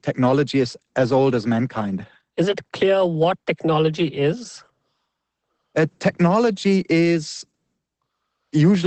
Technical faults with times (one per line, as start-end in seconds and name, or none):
0.00-8.86 Opus voice compression